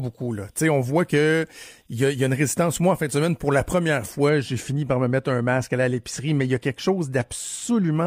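From the start to 4.3 s, just before "j'ai fini par me", the speech sounds thin, bright and hissy, with exaggerated sibilance. This is pre-emphasis left on: the treble boost, shaped like a 50 µs FM curve, was never undone, leaving about 11 dB extra at 10 kHz relative to 1 kHz.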